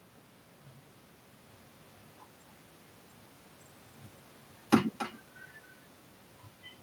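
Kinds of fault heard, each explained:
Echo with no canceller: the far end's loudspeaker feeds its microphone and nothing removes it, so every phrase returns around 300 ms later, about 14 dB quieter and thinner. On a waveform each burst has a smaller trailing copy; a spectrogram shows faint duplicates offset in time.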